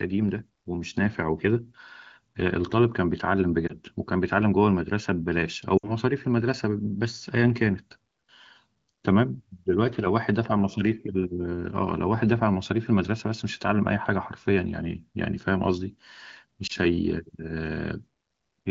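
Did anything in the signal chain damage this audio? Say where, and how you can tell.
Yes, lost AMR speech frames on the radio link. Short dips at 3.68–3.73 s and 16.67–16.72 s fit single 20 ms frames. A longer gap at 5.78–5.91 s that drops to near silence fits three. The decoder repeats its last good pitch and spectral settings with falling gain, so the speech smears rather than clicks.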